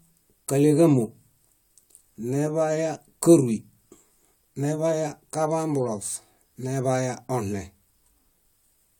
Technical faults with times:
none

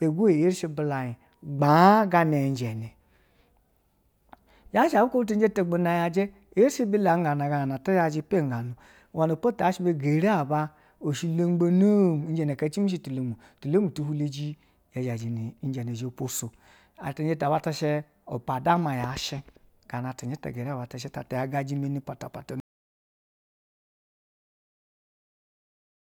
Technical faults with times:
22.60-26.04 audio dropout to silence

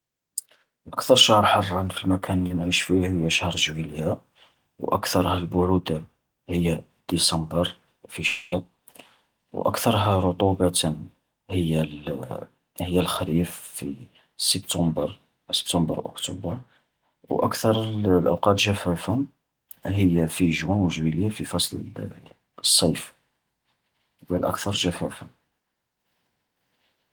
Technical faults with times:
2.47-2.54 short concealed packet loss
8.27-8.54 long network dropout

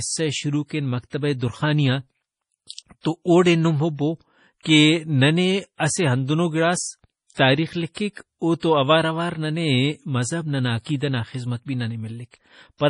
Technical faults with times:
0.00-12.90 MP3 compression
2.67-3.05 pre-echo
4.63-4.65 pre-echo
7.34-7.37 pre-echo
7.94-7.97 pre-echo

